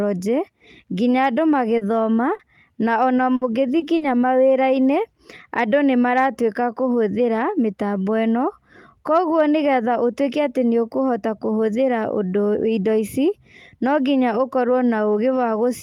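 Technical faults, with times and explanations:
1.77 to 4.03 s, short concealed packet loss: four brief gaps, at 1.77 to 1.83 s, 2.35 to 2.41 s just before "na ona", 3.79 to 3.83 s, and 3.97 to 4.03 s. Each lost 40 ms, except the third, which lost 20 ms. The audio arrived too late to be decoded. The receiver stretched the preceding sound across the hole and blended back in. Each spot sounds like a small smear or wobble.
3.35 to 3.43 s, burst of packet loss: 60 ms vanished in a row, right after "na ona". The receiver carried the last sound forward and let it fade. The result is a held buzz or fading hiss. Then the audio picks up further along. The sound that belonged in that stretch is gone.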